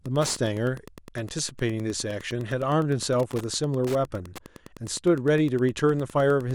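A steady, faint ticking runs under the speech from start to finish, repeating about ten times a second and sitting roughly 20 dB below the voice. This is Wi-Fi interference. A nearby Wi-Fi radio transmits a beacon every 102.4 ms, and the audio circuitry picks up that radio-frequency burst and rectifies it into the audible band, so each beacon lands in the recording as a small click at that fixed rhythm.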